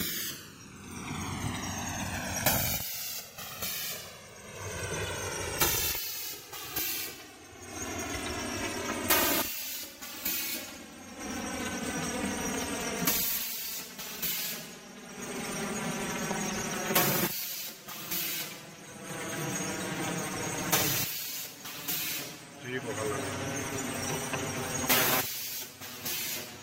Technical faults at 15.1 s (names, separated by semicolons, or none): channels drifting apart